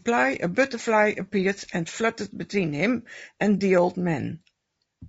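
Throughout the speech, the sound is rough and grainy, a texture that likely comes from low-delay AAC compression at a rate fitting about 32 kbps. Its coarse quantization lets noise in around pitch harmonics, so a spectrogram shows noise filling the gaps between harmonic lines, and a thin, patchy top band.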